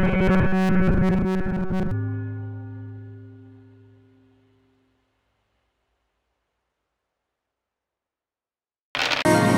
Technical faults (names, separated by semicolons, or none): robotic sound from repeated short buffers